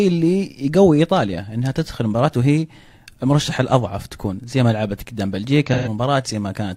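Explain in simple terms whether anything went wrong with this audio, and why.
Near the end, from 5.67 to 5.88 s, AAC frame loss with concealment leaves a smeared, hissy patch where the decoder guessed the missing sound instead of leaving silence.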